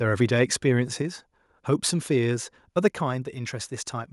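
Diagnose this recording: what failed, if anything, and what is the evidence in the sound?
Speech and background fall about 4 dB in one step at 2.88 s, not a ramp: likely microphone volume stepped down in call processing.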